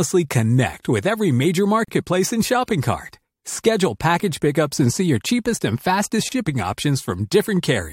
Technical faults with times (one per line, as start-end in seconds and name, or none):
1.85-1.88 gap at a join of encoded pieces
6.29-6.32 gap at a join of encoded pieces